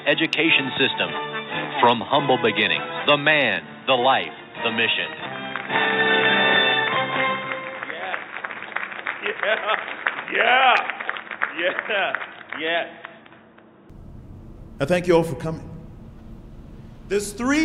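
The input most likely switched to a poorer device, a narrower-band microphone or headset call path. From the start until about 13.9 s, the audio passes nothing above 3.8 kHz, so it sounds dull and boxy, with a faint new noise floor sitting well below the signal. At 13.9 s the full band returns with no gap, and the sound opens up at much the same loudness.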